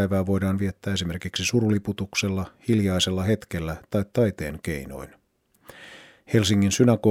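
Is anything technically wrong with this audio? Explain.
No, nothing technically wrong stands out in this speech recording, so there's nothing here to flag.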